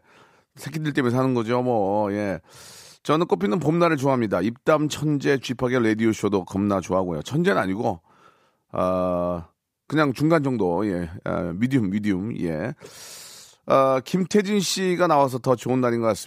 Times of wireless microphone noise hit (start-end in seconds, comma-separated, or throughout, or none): none